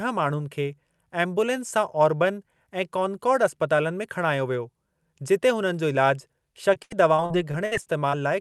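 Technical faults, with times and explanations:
6.73–8.14 s, repeated packet loss (robotic sound): nine separate dropouts land in this 1.4 s stretch, the longest about 71 ms. Each hole is bridged by extending the sound just before it, so roughly a fifth of the span is synthetic fill, around 0.3 s in total. That rapid chain of stitched-over gaps gives the choppy quality, heard against the call codec's roughly 12 kHz top end.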